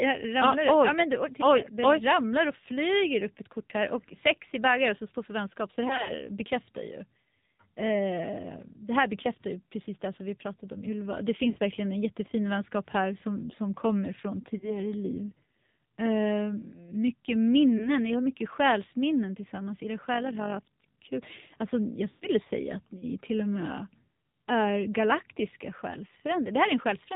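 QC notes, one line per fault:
Throughout: AMR narrowband mobile codec. Nothing above 4 kHz comes through, so the sound is thin and muffled. The speech is plainly buzzy and synthetic, which points to a low AMR-NB mode near 7.4 kbps. At that rate the codec rebuilds each frame from a coarse model of the vocal tract and only a few pulses, so fine detail is replaced by a mechanical, coded texture.
5.88–6.11 s, 11.50–11.58 s, 14.58–14.77 s, 17.78–17.90 s, 22.10–22.28 s: lost AMR speech frames. At each spot the decoder had no valid frame to play. It repeated the last good pitch and vocal tract settings at falling gain, so the sound smears, warbles and sags. The 11.50 s gap falls just before "verkligen en jättefin vänskap". The 14.58 s gap comes after "som som kommer från", and the 17.78 s gap comes before "ni har mycket själsminnen". The 14.58 s and 17.78 s events sound like a single missing 20 ms frame, a brief dip. 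The 11.50 s gap is about 60 ms. Near 6 s, about 100 ms is missing, scattered over 200 ms, with the longest stretch about 60 ms. At 22.10 s about 120 ms is gone, long enough for the sound to stretch and fade before recovering roughly.
20.14–20.94 s: overlap-add ripple. The level pulses by about 6 dB, about 50 times a second. The result is a fast, rough tremolo. It happens because the audio was split into windowed frames and rejoined with an overlap that does not sum to a steady gain. Each frame boundary therefore brings a rise and fall in loudness, heard as flutter at the frame rate.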